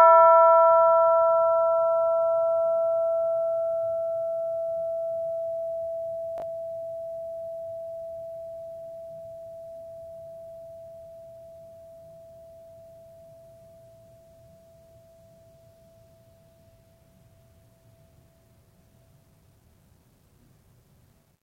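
At 6.38 to 6.42 s and again at 21.10 to 21.14 s, chunks play out of order. One 20 ms chunk arrives late, so the music briefly jumbles.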